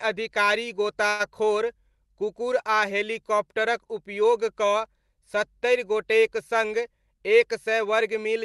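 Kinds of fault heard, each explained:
Call audio freeze: At about 1.09 s, the sound stops moving forward for roughly a tenth of a second. The last bit gets stretched into a short buzzy or hissy fill that never drops to silence. At 1.21 s it picks up right where it left off, with nothing skipped, so about 0.1 s is added rather than lost. That pattern most likely comes from packets stalling in transit and the jitter buffer running dry.
Jitter buffer speed-up: Just after "सत्तरि गोटेक सङ्ग", from 6.96 to 8.19 s, the speech runs at about 107% speed with no change in pitch. The receiver had more audio queued than it wanted, so it kept snipping out tiny slices, each a pitch period or so long, to trim the backlog by roughly a tenth of a second. You hear it as a slightly rushed delivery over that stretch.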